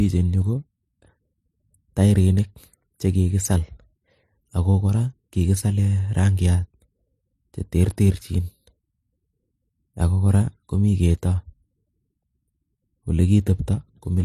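Throughout the speech, nothing is heard above 13.6 kHz. Two different kinds of compression smear overlap. This is likely transcoding between lossy codecs, consistent with low-rate MP3 followed by HE-AAC. The second encoder spent bits on the first one's artefacts and added its own.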